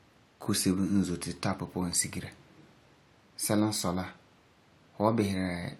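No technical faults can be heard in this speech recording. Nothing in the audio points to a problem anywhere in its capture, transmission or playback.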